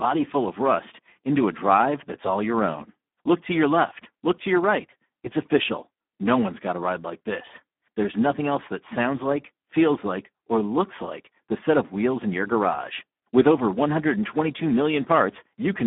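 Speex codec damage runs throughout this speech clip, from the first second to the last. The sound is confined to a telephone-style band of roughly 200 Hz to 3.5 kHz, with nothing at all above 3.8 kHz. The voice is heavily degraded: hoarse, noisy and edging toward a robotic, buzzy quality. This is a CELP coder starved of bits for its excitation signal, consistent with a narrowband setting around 8 kbps.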